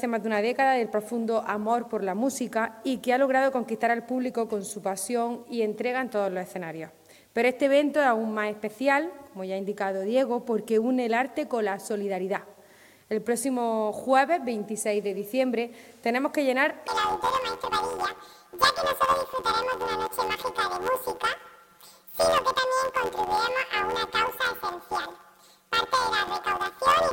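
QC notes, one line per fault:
16.88–27.12 s, planar audio read as interleaved: each block of all-left then all-right samples is read as alternating pairs, so every block plays twice at double speed, once per channel. The blocks are short, 11.61 ms, which fits a 512-sample block, so the sound turns into a robotic buzz at the 86.1 Hz block rate rather than a clear octave jump.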